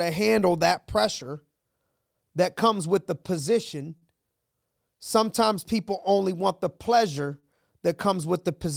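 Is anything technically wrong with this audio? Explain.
Yes, there are two short stalls from a late packet in this speech. At 3.97–4.05 s, just after "comes with the position", and at 7.40–7.46 s, the jitter buffer ran dry. The last sound was stretched for 41 ms and then 28 ms until the packet arrived, so nothing is lost but everything after each stall is delayed by that much. On a spectrogram, the harmonics run flat and smeared, and the waveform shows a repeated, slightly dipped cycle.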